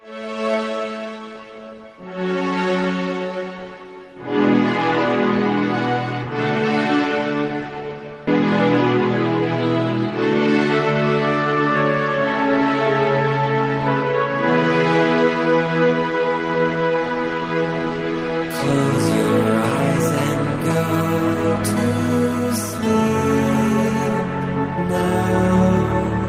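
At 8.27 s a skip ahead occurs: with later audio already queued, around 0.4 s was discarded and playback jumps straight across with no fill. It sounds like an abrupt lurch forward, and a spectrogram shows the two sides of the jump butted together at a hard vertical seam.

From 10.47 to 11.02 s a jitter buffer speed-up drains excess buffered delay by repeatedly excising pitch-period-sized slices, about a tenth of a second in total. The sound runs 15% fast at unchanged pitch, hurried, with a compressed waveform and harmonics holding their frequencies.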